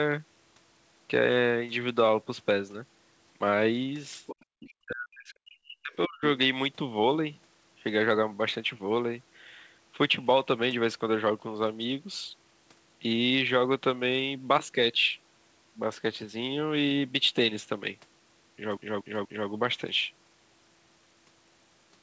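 From 4.26 to 4.45 s, and briefly again at 4.66 to 4.7 s, a second, fainter voice sits under the speech, well below it and quieter on the second pass. This is the other side's voice leaking through, likely loudspeaker echo the canceller did not fully remove. It is a separate talker, not a repeat of this one.

At 4.55 to 4.66 s and then across 4.82 to 6.22 s, the speech is suppressed in double talk. It drops by roughly 40 dB at its deepest, for about a second in total, likely because the canceller ducked everything while both sides spoke.

From 18.77 to 19.49 s, the CD is stuck on one turn. A 0.24 s slice of audio repeats three times, with a short mute at each jump back. Its even, mechanical stutter sets it apart from the irregular gaps of network loss. The speech also carries the G.722 call path's 8 kHz top end.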